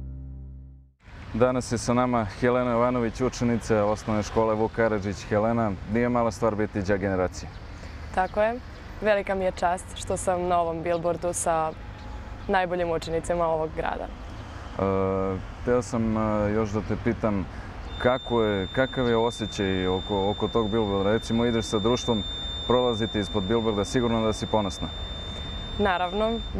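A feedback whistle runs from 17.84 s to the end of the clip at 26.6 s: a thin, steady tone at 3.6 kHz sitting roughly 15 dB beneath the main sound and swelling and fading slowly in level. The likely cause is an acoustic loop between a loudspeaker and the microphone held just at the edge of instability, so that one frequency keeps ringing without building into a full howl.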